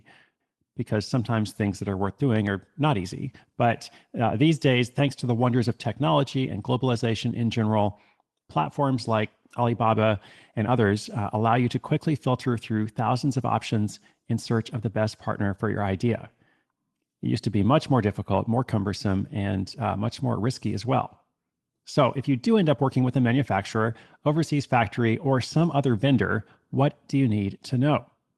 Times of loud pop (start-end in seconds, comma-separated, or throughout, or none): 2.36-2.49